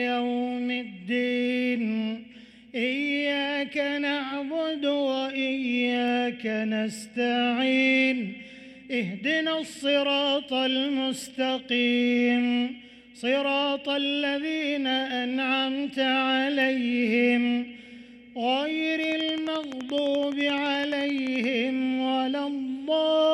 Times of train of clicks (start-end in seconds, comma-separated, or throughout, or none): 19.04-21.45